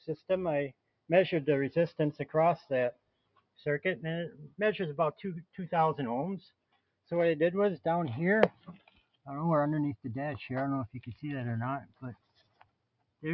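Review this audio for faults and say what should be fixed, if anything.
A noise suppressor built for speech was left running over the whole clip. It treats steady tones, ambience and decaying tails as noise, so the level keeps pumping by something like 15 dB, with held parts sinking while attacks punch through.

There's also sound cut by the noise suppressor in six spots: 0.0–0.3 s, 0.7–1.09 s, 2.92–3.65 s, 6.41–7.11 s, 8.52–9.28 s and 11.8–13.24 s. Each dips by up to about 21 dB. The longest stretch, near the end, lasts well over a second.

The call microphone processing stops at 8 kHz, which is expected for that path.

To prevent all this, switch the call app's noise suppression off or to a music mode before capturing anything that isn't speech.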